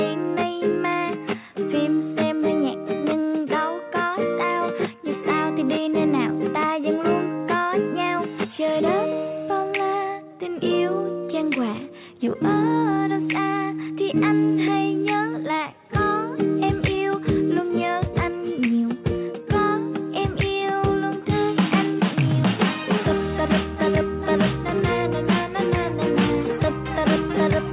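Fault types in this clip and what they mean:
No faults detected; the audio carries the narrowband character of a telephone-grade call path, with nothing above 4 kHz.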